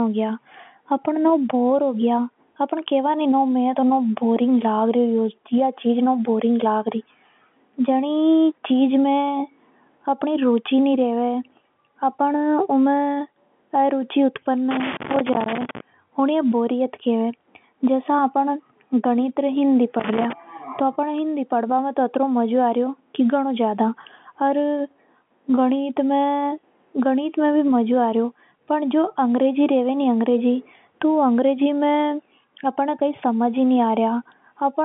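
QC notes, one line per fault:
14.71 to 15.80 s and 20.00 to 20.33 s, loose connector crackle: a worn or dirty contact in the signal path is intermittently losing and regaining connection as it shifts, so the audio is chopped on and off many times a second, and any DC sitting on the line snaps in and out as pops. The result is two irregular bursts of scratchy crackle laid over the speech, confined to the narrow telephone band the line carries, which fits G.711 mu-law coding.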